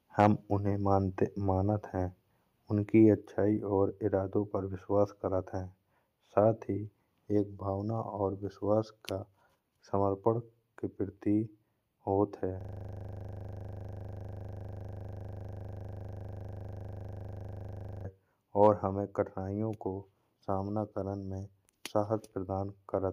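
Right at the start, from 0.2 to 0.27 s, there's microphone overload. The peaks run about 3 dB past the converter's limit and a few percent of samples get their tops sheared off, giving a short crackly edge, likely from the mic input gain being set too hot. Then at 3.21 s the whole level, voice and background together, drops abruptly by about 4 dB. That's the microphone volume stepped down, likely the call software noticing the clipping and pulling the input gain back in one go.

The big one is from 12.61 to 18.05 s, a system hang loop. The machine or driver stalls while the audio hardware keeps replaying the same 40 ms stretch of its ring buffer, well over a hundred times. At a 25 Hz repeat rate it comes across as a hard, rattling buzz-stutter instead of speech. Just after it, from 18.62 to 18.67 s, there's another brief microphone overload, milder this time at about 1 dB over with a couple of percent of samples clipped. 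It has the same quick harsh crackle on the peak, again likely from excessive input gain.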